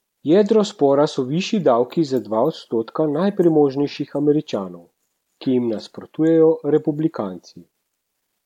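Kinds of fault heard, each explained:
No technical faults are audible anywhere in this speech recording.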